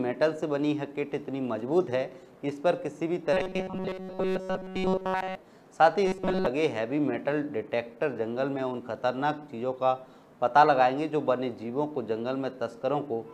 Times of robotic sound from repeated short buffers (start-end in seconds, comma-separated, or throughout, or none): 3.33-5.35, 6.07-6.46